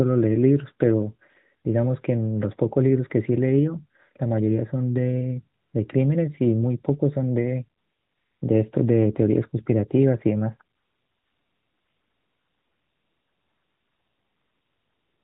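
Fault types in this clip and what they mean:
AMR comfort noise: During pauses the sending phone stopped transmitting speech frames, and the receiving end filled the gaps with synthetic noise generated from a rough level-and-spectrum description, so the real background gives way to a smooth, even hiss. This happens briefly at 5.62 s, for 0.6 s from 7.82 s, and from 10.76 s to the end. Unlike a dropout or noise gate, the gap holds steady noise rather than silence. The narrowband sound around it points to AMR-NB at about 12.2 kbps.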